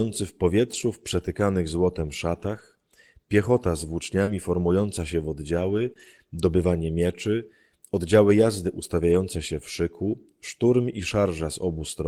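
Speech with a run of network-loss repairs. The first kind is a lost packet rebuilt from error correction: the packet following each lost one carried a low-bitrate backup copy, and the decoder played that instead, so nothing drops out. You just get a rougher, grainier patch at 0.73–0.83 s, 2.43–2.61 s, 4.27–4.33 s, 5.57–5.91 s, 5.97–6.07 s, 6.57–6.63 s and 9.09–9.15 s. The rebuilt stretches are between 40 and 180 ms, and the longest is around 5.6–5.9 s.

Twice there was no backup to fall back on, which gives short concealed packet loss at 4.23–4.29 s and 5.93–5.97 s. There the decoder had nothing for about 40 ms and 20 ms respectively, so it stretched the preceding sound forward and crossfaded back into the real signal. It comes across as a quick smear or wobble. Both sit right against rebuilt patches, so around 4.3 s and 6.0 s the roughness and the smear run together.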